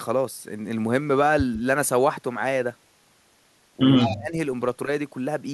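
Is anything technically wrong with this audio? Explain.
Yes. Near the end of the speech, two faults overlap.

From 4.0 to 4.35 s the voice dips sharply, by roughly 20 dB at its deepest. This is speech suppressed in double talk, likely an echo canceller muting the local talker while the far side spoke at the same moment.

From 4.01 to 4.16 s a faint, delayed copy of the voice trails it by 146 ms, about 10 dB below the speech. This is echo leak, likely loudspeaker sound that reached a microphone and slipped past the echo canceller.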